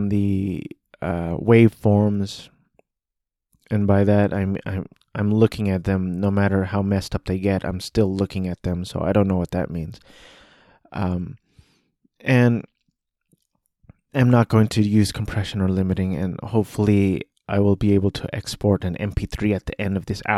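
No faults heard at any point in the recording.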